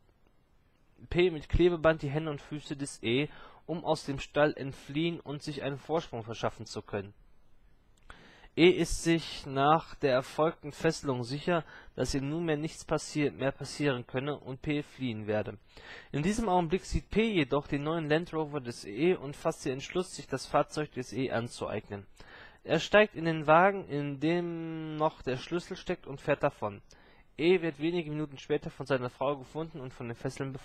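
No technical faults can be heard anywhere in the audio.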